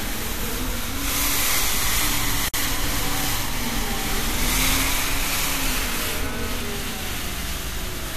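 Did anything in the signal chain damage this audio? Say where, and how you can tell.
Yes. The first damage is at the codec stage: a gap at a join of encoded pieces from 2.48 to 2.54 s. Continuous sound drops out for about 54 ms and then resumes exactly where it left off. Two separately encoded segments were butted together without removing the encoder's start-up delay and last-frame padding. On a waveform this appears as a flat stretch with slightly softened edges. A spectrogram shows a clean vertical blank band across all frequencies.

The second is a single loud pop from 3.24 to 3.27 s, peaking roughly 5 dB above the surrounding sound, while the audio continues unbroken beneath it. The cause is likely a voltage transient in the analogue wiring or from a switch, shaped by the downstream circuitry into a short pulse. The waveform shows one sharp spike, perhaps with a brief ring after it. 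On a spectrogram it is a thin, bright vertical stripe spanning the band.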